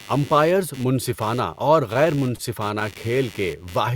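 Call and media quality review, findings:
Computer activity noise, throughout: buzzy pulsing bed at about 100 Hz, roughly 25 dB below the speech, tracking machine load rather than the talker. Probable component is a shared ground between the audio interface and the PC, where processor or graphics current swings modulate the reference. Spectrogram shows evenly spaced vertical ticks and a 100 Hz harmonic comb running through the pauses. The waveform shows a low repetitive ripple floor.

Repeated stalls (stutter), 1.93–2.94 s, starting after "منصفانہ اور": eight brief hitches, longest 28 ms, about 105 ms of stretched sound in total and nothing dropped, about a tenth of that second. Probable cause is the jitter buffer repeatedly running dry as packets arrived late, with the receiver extending the last sound each time. Spectrogram shows short smeared, frozen-harmonic patches. The waveform shows repeated cycles.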